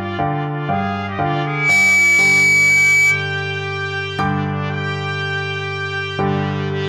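At 1.44 s a loudspeaker feedback squeal begins. A microphone is picking up the loudspeaker it feeds. At one frequency the loop gain goes above one, so that tone reinforces itself on every pass. Here it sits at 2.3 kHz. It swells within about a third of a second into a piercing whistle. It ends up roughly 10 dB louder than the sound around it. The squeal holds until 3.34 s.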